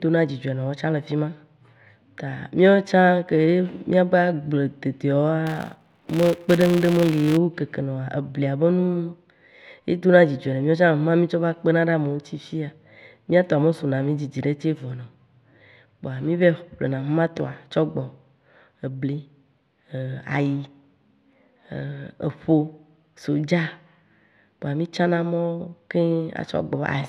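From 5.47 s to 7.37 s, a buzz rides on the speech. It comes from a filter restarted on every block. The filter loses its memory at each block boundary and starts again from silence. Each restart leaves a small click. The clicks repeat at 200 Hz, which points to blocks about 5 ms long. Heard together, they fuse into a steady buzz. It rises and falls with the loudness of the speech.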